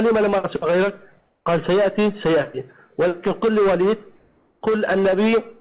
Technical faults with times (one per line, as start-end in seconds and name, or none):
1.19-1.46 comfort noise in place of the background
4.19-4.61 comfort noise in place of the background